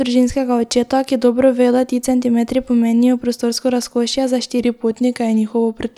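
A speech clip with a drift correction step: from 4.59 s to the end, playback slows by 5.4% and pitch drops by about 97 cents, just under a semitone. This is likely a clock-matching resampler adjusting its rate in one jump. Unlike wow, the change is a single abrupt step, not a continuous wobble.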